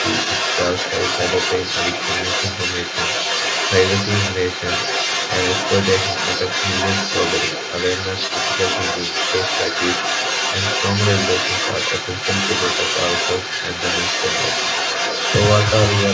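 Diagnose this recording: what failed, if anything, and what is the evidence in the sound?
Other side's voice leaking through, from 0.0 s to the end: a second voice runs under the main talker throughout, at roughly the same level. In the call-processing stage, the echo canceller likely failed to subtract the loudspeaker signal that reached the microphone.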